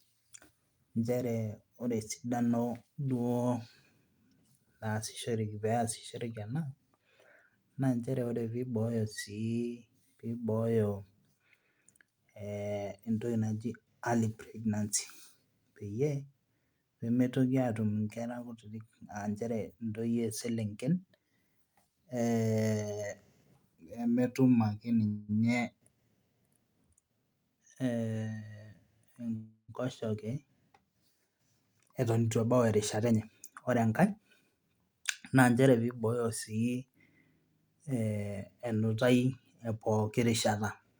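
At 25.07 to 25.31 s a call audio freeze stretches the last sound into a fading buzz for about 0.21 s, likely because delayed packets emptied the jitter buffer. On a spectrogram it shows as smeared, flat horizontal bands, with nothing lost once speech resumes.

From 27.09 to 28.70 s a jitter buffer speed-up runs speech at 112% to shed roughly 0.2 s of excess delay. Pitch stays put, but the delivery sounds hurried. The waveform shows syllables packed tighter, with small pitch-period cuts invisible individually.

At 29.36 to 29.71 s a second call audio freeze fills about 0.33 s, likely from another packet stall. The tail decays into roughly 90 ms of silence, seen as a flat waveform gap after the fading smear.

Further speed-ups follow at 31.60 to 32.54 s (109%), 32.96 to 33.28 s (129%, the most rushed) and 33.70 to 35.51 s (107%), ending just before "nchere piibooyo". Each compresses the timing while keeping harmonic spacing unchanged on the spectrogram.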